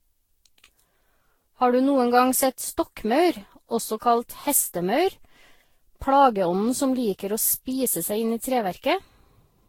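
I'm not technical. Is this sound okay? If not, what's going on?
No. The whole recording sounds swirly, hollow and smeared. This is generation loss, likely from being compressed and re-saved about ten times.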